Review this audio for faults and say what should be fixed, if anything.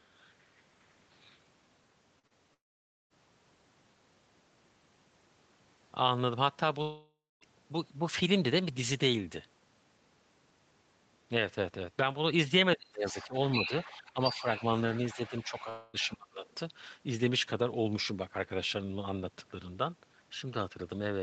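Short concealed packet loss at 2.19–2.26 s and 2.27–2.33 s: about 40 ms went missing each time, and the receiver's concealment extended the preceding sound, leaving brief smears. A larger jitter buffer or forward error correction would cover these gaps.

Long network dropout at 2.54–3.13 s, 6.82–7.44 s and 15.69–15.97 s: the sound briefly continues, then goes silent for roughly half a second in the first and a quarter-second in the second, and resumes with material missing. The likely cause is a network interruption. Stabilising the link or adding redundancy would prevent it.

Speech suppressed in double talk at 12.76–13.34 s, 13.68–14.61 s and 15.15–16.46 s: the speech level dips, at its deepest by roughly 35, 10 and 30 dB. The likely cause is the echo canceller ducking the talker while the far side is active. Better double-talk detection in the canceller would prevent it.

Other side's voice leaking through from 13.10 to 16.15 s: a second voice is audible only around 5 dB below the talker, likely loudspeaker echo that the canceller failed to remove. 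A headset or better echo cancellation would prevent it.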